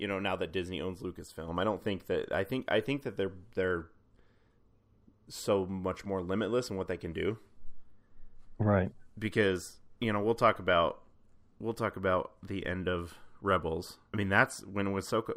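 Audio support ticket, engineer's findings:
Signal checked across the full speech recording with no technical faults found; no component action required.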